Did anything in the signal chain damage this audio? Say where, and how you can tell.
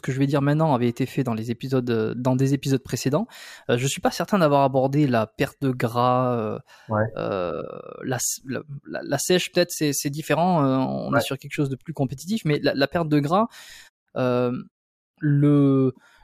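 No, nothing along the signal chain has damaged this speech. In the pauses the output fades to silence and the background drops away, then returns in time for the next sound, so only very quiet sound is lost.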